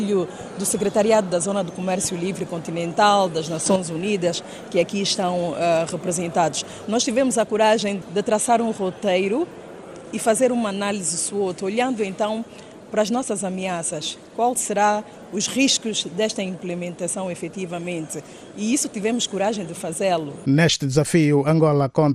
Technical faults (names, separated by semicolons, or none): MP2 compression